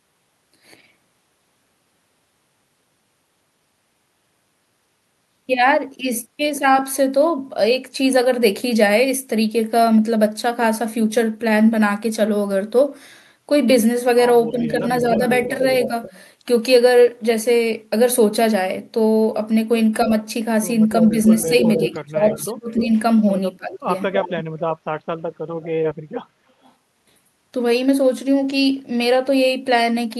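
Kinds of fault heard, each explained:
Speech suppressed in double talk: when both ends talk over each other, the echo canceller can't tell the local talker from the loudspeaker echo and pulls everything down. The dips here are brief, at 14.51 to 15.2 s and 20.05 s by about 5 dB, and then much deeper, around 30 dB, from 21.11 to 22.93 s and 23.57 to 23.89 s. Likely just the canceller ducking during overlap.
Echo leak: a delayed copy of the speech comes back, roughly 300 ms late, which likely means the far end is on a loudspeaker and its canceller isn't catching everything its mic hears. You get it at 14.74 to 16.19 s, 20.91 to 22.85 s, 24.12 to 24.43 s and 25.62 to 26.72 s, sitting about 10 to 15 dB under the main speech.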